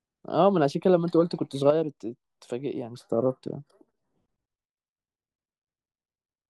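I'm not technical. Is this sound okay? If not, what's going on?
No. At about 1.70 seconds the speech suddenly gets noticeably quieter and stays that way to the end, as if someone turned it down partway through. This is a one channel drops out fault. The recording had two sides, left and right, and one side was likely lost at that moment. When the two sides are combined for playback, the remaining side alone carries less, so everything drops in loudness, and anything only on the missing side vanishes.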